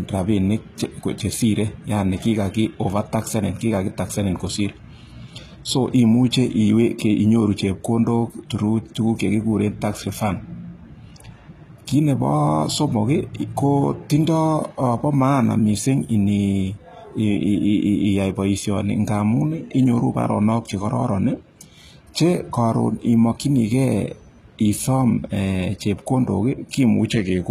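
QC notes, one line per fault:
Throughout: HE-AAC compression, likely, at a rate fitting about 20 kbps; treble rebuilt from copied lower bands sounds gritty and lispy on s sounds, with nothing above 14.9 kHz.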